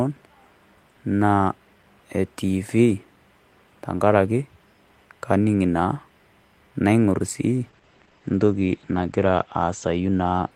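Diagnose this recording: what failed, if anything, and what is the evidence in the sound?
From 7.64 s, just after "kaing'orr sii", to the end of the recording, the speech goes coarse and dull, the signature of a call bitrate drop at the codec stage. The audio band narrows from 20 kHz to 8 kHz, and a rough, watery texture is heaviest for about 1.8 s, consistent with the encoder falling from about 32 kbps to 12 kbps. Unlike packet loss, there are no gaps or stutters, and unlike a fixed low-pass filter, the coding grit tracks the sudden rate cut.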